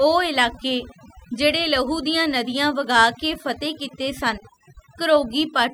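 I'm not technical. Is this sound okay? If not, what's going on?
No. This speech clip suffers from overdone noise removal, and it affects the whole recording from start to finish. A noise-cleaning tool was pushed too hard: wherever a slice of the sound resembled background hiss, it cut that slice almost to nothing, and the softer parts of the voice were removed along with it. The result is a background that drops away and breaks up into twinkling specks.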